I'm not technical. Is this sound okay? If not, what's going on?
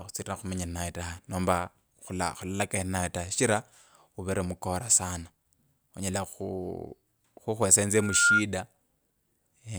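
No, not quite. From about 7.94 to 8.44 seconds there's a loudspeaker feedback squeal. The microphone is picking up the speaker it's feeding, and that loop keeps boosting one pitch, here around 1.4 kHz, a thin whistle. It swells over roughly a third of a second until it's clearly louder than the speech, then stops. Keeping the mic away from or behind the speaker, or turning it down a touch, prevents it.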